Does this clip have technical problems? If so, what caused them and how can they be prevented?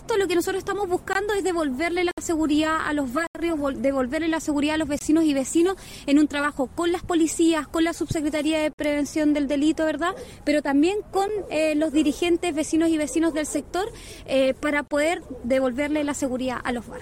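Yes, there are seven blocks of digital silence, at 1.13–1.15, 2.11–2.18, 3.27–3.35, 4.99–5.01, 8.73–8.79, 11.28 and 14.88–14.91 s. Each one cuts hard to silence and back, so the 11.6 ms one ticks and the 64 and 81 ms ones sound like small holes. Two of them last 21.33 ms, which fits a 1024-sample buffer the program didn't fill in time. To prevent this, give the audio thread more headroom with a larger buffer or higher priority.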